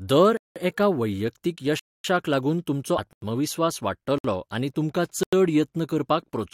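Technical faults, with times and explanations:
0.37 to 5.33 s, blocks of digital silence: the speech drops to digital silence with no fade at 0.37 to 0.56 s (186 ms, just before "एका वैयक्तीक"), 1.79 to 2.04 s (250 ms, between "एका वैयक्तीक" and "लागून तुमचो"), 3.13 to 3.22 s (93 ms, right after "लागून तुमचो"), 4.18 to 4.24 s (60 ms) and 5.23 to 5.33 s (93 ms). The 186 ms and 93 ms lengths fit whole 8192- and 4096-sample buffers that were not filled in time, so zeros were played instead.
2.97 s, compressed frames skipped: about a tenth of a second of audio is missing here, so the speech jumps forward. Whole coded frames were not decoded, either because they were absent or because the decoder rejected them as damaged.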